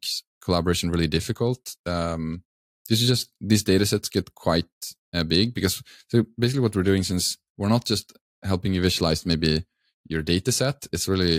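No technical faults detected.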